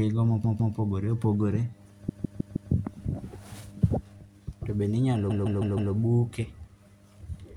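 At 0.43 s the speech stutters until 0.75 s. This is repeated frames: a block of about 157 ms of compressed audio is replayed. The length fits a run of six frames. Here the block plays two extra times, adding about 0.31 s. At 2.08 s it happens again, running to 2.71 s. The block now plays four extra times, adding about 0.63 s. Just after "bende inyalo", at 5.29 s, the same fault repeats four times more, to 5.92 s.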